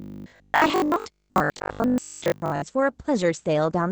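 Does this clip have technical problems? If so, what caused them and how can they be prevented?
Yes. From 0.02 to 2.62 s the speech has a rigid metallic buzz at 50 Hz, the robotic sound from repeated short buffers. It was likely caused by audio arriving too seldom, so the software replayed roughly 20 ms buffers in place of most of the real signal. Prevent it with larger, steadier audio buffering or a less loaded processing thread.

Throughout, Opus voice compression leaves the speech muffled and hoarse, with nothing above 8 kHz. This points to SILK wideband coding at about 12 kbps. Prevent it by encoding at a higher bitrate.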